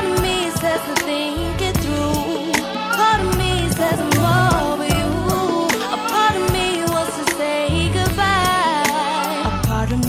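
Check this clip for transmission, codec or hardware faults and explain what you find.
No transmission, codec or hardware problem can be heard anywhere in the signal.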